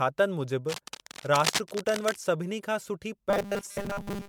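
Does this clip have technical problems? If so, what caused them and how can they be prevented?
Yes. The speech appears to have been decoded and re-encoded as MP3 about seven times at roughly 150 kbit/s, which is the likely cause of the generation loss. Each pass requantised on a shifted frame grid, so the errors piled up into a swirly, hollow, smeared sound with blurred attacks. Keeping a lossless master and encoding only once prevents this.

From 0.69 to 2.16 s, ending just before "सभिनी खां सुठी", cable scratch noise appears. A worn cable or connector being moved is the likely cause. Its rapidly changing contact resistance produced dense, uneven scratching about 5 dB below the speech. Replacing or securing the cable prevents it.

From 3.30 s, after "सभिनी खां सुठी", to the end, there is robotic sound from repeated short buffers. Audio was likely arriving too seldom, so most of the sound is a repeated fragment while real audio is skipped. 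The 200 Hz buzz fits a 5 ms buffer. A larger buffer or steadier audio scheduling prevents it.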